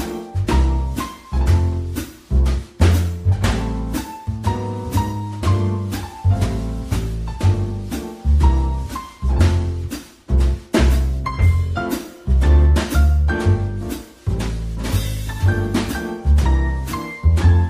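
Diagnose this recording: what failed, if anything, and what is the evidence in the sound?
The failure is in sample-rate conversion. From 6.80 s to 11.15 s a gritty, inharmonic fizz rides on the sound, strongest on loud and bright passages. It sits roughly 45 dB below the signal. This is crude rate conversion. Samples were linearly interpolated to a new rate with no anti-aliasing filter. The pattern fits a 48 kHz to 44.1 kHz change. The interpolation error repeats at a rate set by the two rates, producing shifted, inharmonic copies of the content.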